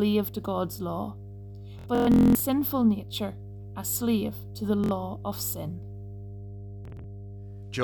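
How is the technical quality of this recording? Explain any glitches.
The technical quality is poor: a constant mains hum runs under the speech, and Bluetooth stutter breaks it up three times.

Mains hum: a ground loop or nearby transformer is leaking the power line into the signal, producing a steady 50 Hz drone only about 15 dB below the speech throughout.

Bluetooth stutter: the wireless link dropped or delayed audio packets, so the receiver kept replaying its last short buffer until fresh data arrived, giving a buzzy machine-gun stutter before the speech jumps ahead.
From 1.79 to 2.40 s, just before "nature a slave to", about 441 ms is lost in bursts of up to 232 ms.
From 4.84 to 4.91 s, between "a slave to the" and "of sin", about 70 ms is lost.
From 6.85 to 7.04 s, about 93 ms is lost in short runs of up to 23 ms.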